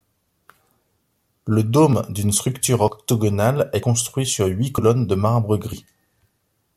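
A speech clip with three brief skips at 1.93, 2.88 and 3.83 s. At each, a small slice of sound, around 50 ms, vanishes and the surrounding audio closes up directly, with no silent gap. That seamless join separates it from a dropout, which leaves a hole. The skips recur about every second, likely audio missing between chunks as a recorder working in 1-second blocks loses material at each handover.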